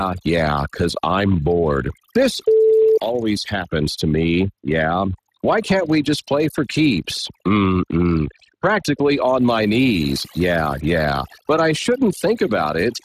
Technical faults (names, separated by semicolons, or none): overdone noise removal; Speex codec